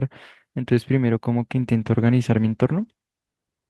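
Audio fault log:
1.73–3.03 s, call bitrate drop: partway through the speech the sound turns coarser and watery, with the top end dulled, and it stays that way for about 1.23 s before clearing up. That's the encoder being told to spend far fewer bits after the call's bandwidth estimate fell. The character of it suggests the rate roughly halved, from around 32 kbps down to about 16 kbps, so each frame gets coded more crudely and the highs get trimmed until it recovers.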